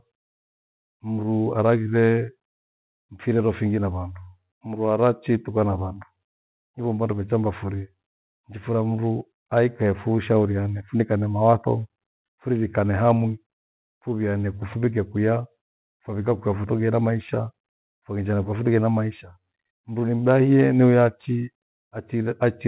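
No technical faults can be heard in the speech, which comes over a G.711 call path with nothing above 4 kHz.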